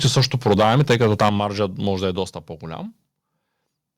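Microphone overload runs from 0.04 to 1.29 s, ending just before "маржа може да е". The loudest peaks are pushed about 8 dB past the converter's limit and flattened, with roughly one sample in twenty clipped. This gives a harsh, crackling edge, likely because the input volume was set too high.

Microphone volume stepped down three times: at 0.07 s by about 3 dB, at 1.29 s by about 8 dB right before "маржа може да е", and at 2.31 s by about 5 dB just after "маржа може да е". Voice and background fall abruptly together each time, likely from the call software lowering the device's input gain in single steps.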